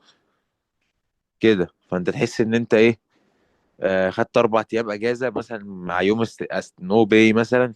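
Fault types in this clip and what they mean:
Corrupt frame decoded: damaged bits in compressed frames were decoded as if valid, scattering energy to wrong frequencies. A sharp, fairly loud burst spans about two frames at 3.88–3.91 s, and a much fainter single-frame blip sits at 7.10 s.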